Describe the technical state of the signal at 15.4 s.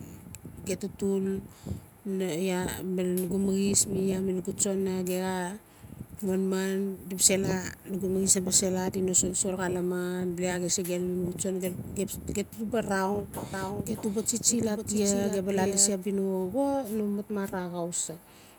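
At 15.4 s a doubled audio track is present, running from 13.5 to 15.9 s. A second full-band copy of the speech trails by roughly 0.7 s at a few decibels lower, likely from a slower capture path. Unlike an echo, it shows no decay or room colour and stops abruptly.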